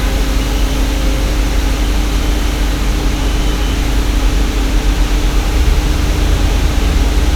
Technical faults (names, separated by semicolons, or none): none